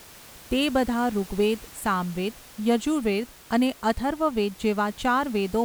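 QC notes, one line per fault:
No faults to note.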